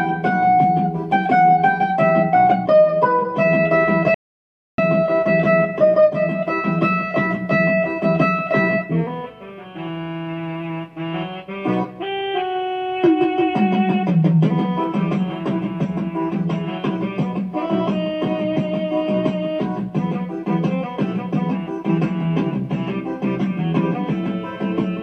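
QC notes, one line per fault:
4.14–4.78 s: audio dropout to silence. About 640 ms of sound cuts out to dead silence with no room tone, likely from a lost input feed or mute.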